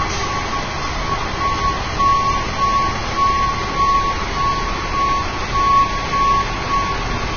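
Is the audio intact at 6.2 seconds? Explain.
No. At 6.2 seconds, as throughout the clip, the sound is hissy and grainy, with roughened tones, smeared attacks and nothing above about 6.6 kHz. This is likely heavy Vorbis compression at a very low bitrate, which discards the treble and quantises the remaining fine detail into noise.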